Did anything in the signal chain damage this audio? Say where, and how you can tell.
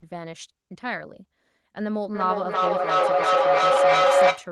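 Yes, there's a feedback howl in the call path from 2.14 s to the end. Two endpoints share a room, so each mic-to-speaker trip adds gain. It narrows to a tone around 500 Hz, with repeats roughly every 300 ms, and peaks about 10 dB above the speech.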